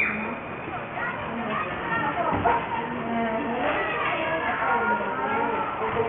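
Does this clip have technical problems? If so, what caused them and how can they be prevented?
Yes. Aliasing runs through the whole clip: high-frequency content sounds gritty and metallic, with harsh tones at pitches unrelated to the source. The sound points to a drop from 48 kHz to 6 kHz without an anti-aliasing filter, so everything above 3 kHz folded back below it, landing roughly 15 dB under the wanted sound. On a spectrogram, energy runs hard up to a 3 kHz ceiling, with mirrored streaks sitting below it. To prevent this, low-pass filter below the new half-rate before resampling.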